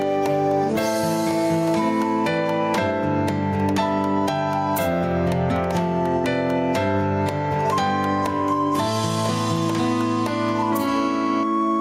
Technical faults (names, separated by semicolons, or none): gain pumping